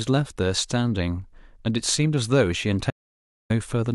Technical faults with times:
2.90-3.50 audio dropout to silence

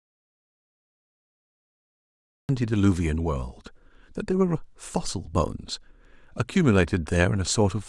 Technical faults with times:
0.00-2.49 audio dropout to silence

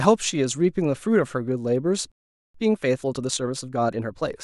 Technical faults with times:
2.12-2.54 playback stall
2.54-4.24 time-compressed catch-up

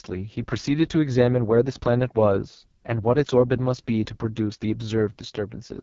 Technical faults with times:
0.00-5.82 AMR wideband (HD Voice) codec

